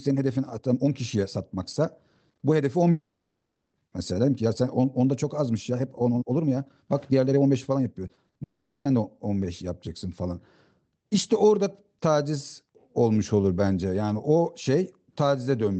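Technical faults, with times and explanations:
2.91–3.75 s, long network dropout: for about 0.82 s nothing arrives, likely a network stall. The receiver stretches the last sound into a fading buzz, then roughly the final 0.31 s falls to silence, and the speech resumes with that stretch simply gone.
8.07–8.41 s, repeated packet loss (robotic sound): five short holes, the longest 40 ms, each patched by extending the preceding sound. With about 41% of this span filled in, the speech turns choppy, pieces missing between the patches.
8.43–8.87 s, long network dropout: right after the choppy stretch, about 0.42 s goes missing, likely another network stall. Nearly all of it is covered by a fading continuation of the last sound, with only a brief moment of silence before the speech picks up again further on.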